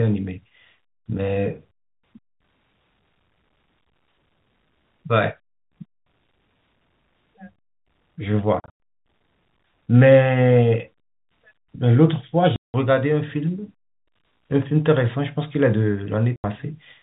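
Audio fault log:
8.6 to 16.44 s, packet loss filled with silence: three dropouts in this telephone-band speech, at 8.6 to 8.76 s (about 160 ms lost in scattered bits, longest hole 100 ms), 12.56 to 12.74 s (180 ms) and 16.36 to 16.44 s (80 ms). The gaps fit 20 ms packets going missing and being replaced with dead silence. That's why the holes have hard edges.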